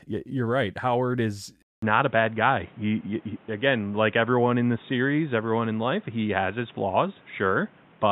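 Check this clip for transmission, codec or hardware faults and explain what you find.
One fault: at 1.62 s the input likely switched to a poorer device. After a 200 ms silence, nothing above 3.8 kHz passes and new background noise sits far below the speech, so the sound stays dull and boxy, at unchanged loudness.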